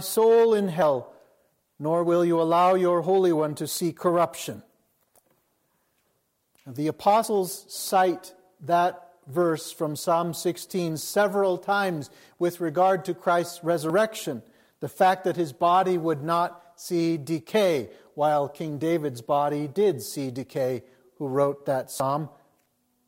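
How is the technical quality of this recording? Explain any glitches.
Three glitches stand out. At 7.24 s, 13.9 s and 22.0 s the sound jumps forward. About 70, 20 and 40 ms go missing. The likely cause is a dropped buffer (overrun): samples were overwritten before being read, so the gap's edges join directly.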